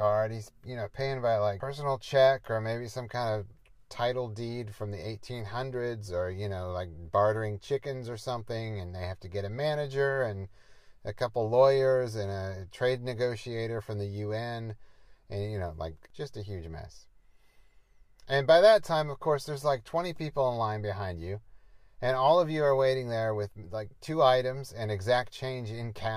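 No technical faults can be heard in this audio, so there is nothing to set out in time order.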